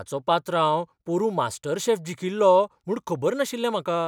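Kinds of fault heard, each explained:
Nothing in this speech clip stands out as a fault, so there's no kind of problem to list here.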